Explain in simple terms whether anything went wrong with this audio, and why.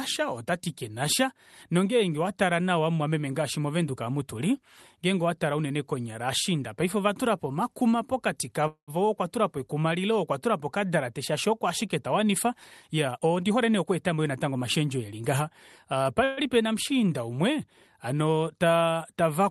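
Two brief hitches interrupt the speech. Right after "ovashiinda ovatulapo omakuma pokati", at 8.67 to 8.91 s, the last sound is held as a short fading buzz and then about a tenth of a second of silence. At 16.24 to 16.40 s the same kind of held sound appears without any silence. These are call audio freezes, likely caused by packets arriving late so the receiver briefly ran out of audio and stretched what it had. Nothing is lost; the talk simply resumes a moment later.

Between "shaashi oko ashike tawanifa" and "eli ngaha", from 12.94 to 14.63 s, the speech sounds hurried, running about 12% faster while the pitch stays the same. This is a jitter buffer speed-up. After a backlog built up, the receiver trimmed many tiny slices of sound in a row, about a fifth of a second in total, to catch back up to real time. The audio travelled over a normal internet-call connection, which also slightly dulls the very highest tones.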